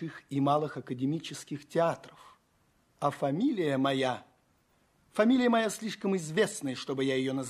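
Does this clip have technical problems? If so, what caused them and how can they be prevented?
No, no technical problems can be heard in this clip. There is nothing here that needs fixing or preventing.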